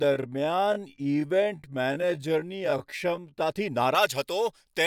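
From the start to 3.4 s the speech runs as a time-stretched section, dragged out to about 0.55 times its normal pace while the pitch holds steady. The likely cause is software lengthening the audio by repeating short grains. The result sounds dragging and slow. On a spectrogram, harmonics keep their spacing but stretch sideways, and the waveform shows repeated, near-identical cycles where the splices overlap.

From 3.95 s to the end, the pre-emphasis was left on: the treble boost matching the J.17 curve was applied without the matching de-emphasis cut afterwards, leaving 10 kHz about 11 dB stronger relative to 1 kHz. The speech turns thin, bright and hissy, with sharpened sibilants. A spectrogram shows the upper bands abruptly brighter from that point, and the waveform looks spikier, dominated by fast high-frequency detail.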